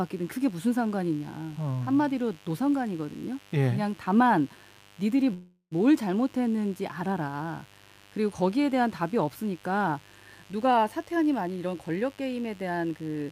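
A speech recording with a mains buzz running through its whole length, about 30 dB below the speech. It is a steady, raspy buzz on a 50 Hz mains fundamental. The raspiness comes from a long series of harmonics reaching up into the kilohertz range. That points to sharp switching spikes twice per mains cycle, such as from a dimmer, a rectifier or a missing shield, rather than a pure hum. From 5.33 s to 5.73 s there is a call audio freeze. The last sound is stretched into a fading buzz or hiss for about 380 ms, which ends in roughly 50 ms of silence. The speech then resumes exactly where it stopped, with nothing lost, so the clip carries an extra 380 ms of delay from that point on. This is likely packets arriving late and the jitter buffer running dry. From 10.53 s to 13.24 s a jitter buffer speed-up takes over. Short pitch-period-length pieces are cut out over and over, and around 0.3 s is removed in total. 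The speech runs at about 111% of normal speed at unchanged pitch and sounds hurried. This fits a receiver that has too much audio buffered and is draining the surplus to bring the delay back down.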